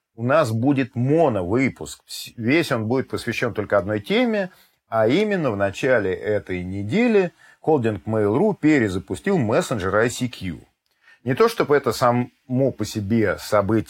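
At 5.20 s there's a sharp snap, an electrical switching spike, sitting right on top of the sound. It's over in a couple of milliseconds and peaks somewhere around -20 dBFS. The likely culprit is a nearby switch, motor or static discharge throwing off a brief arc that the audio line picked up.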